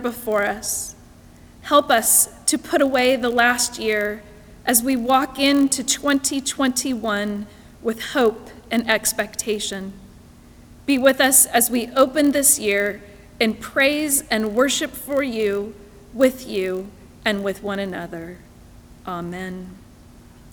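From start to finish, a block size mismatch (padded) is present: one stage hands over blocks slightly shorter than the next stage reads, which fits a 1024-sample read block, and the missing tail of each block is filled with silence. That tiny zero gap recurs at the block rate, producing a steady 46.9 Hz buzz under the sound. Because the gaps are so short, the audio runs only marginally slow, at 0.999 times normal speed, with pitch essentially unchanged.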